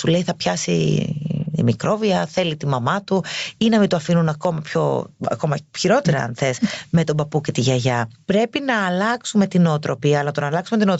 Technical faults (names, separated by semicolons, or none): gain pumping